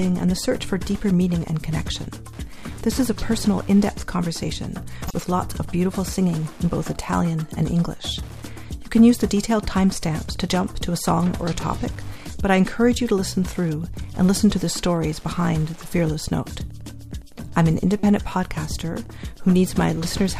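Across the whole clip runs Wi-Fi interference: a faint, steady ticking about ten times a second, sitting roughly 30 dB under the sound. A nearby Wi-Fi radio's beacon, sent every 102.4 ms, is being rectified by the audio circuit, so the ticks keep perfect time regardless of the programme. That fixed tick rate, rather than a continuous 50 or 60 Hz tone, is what separates it from mains hum or buzz.

At 5.04 s a corrupt frame decoded produces a short, loud chirp lasting about 0.1 s. Damaged bits in the compressed data were played rather than discarded, so the decoder put energy at the wrong frequencies for the span of a few frames. At 18.00 s a second one gives a briefer but louder blip of about 36 ms. Unlike concealed packet loss, nothing is smeared. Instead, alien junk appears.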